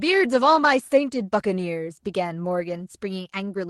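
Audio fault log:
No faults heard.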